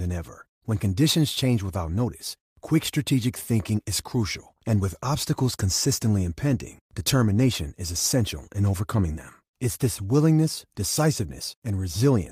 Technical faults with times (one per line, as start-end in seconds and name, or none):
none